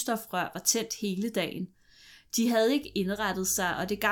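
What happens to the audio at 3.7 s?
At 3.7 s you're in the middle of a stretch of mains hum that starts at 2.82 s and runs to the end of the clip. A steady 50 Hz drone sits roughly 25 dB under the speech, power-line leakage from a ground loop or a nearby transformer.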